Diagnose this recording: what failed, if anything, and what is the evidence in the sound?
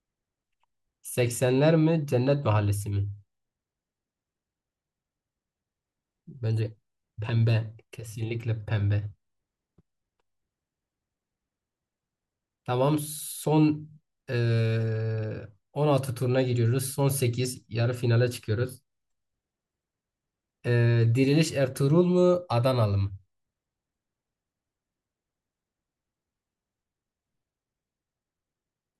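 Nothing in the recording points to a failure at any stage, from the analogue input through conversion, processing, transmission and playback. The speech plays through with no disturbance anywhere in the sound that would count as evidence of a fault.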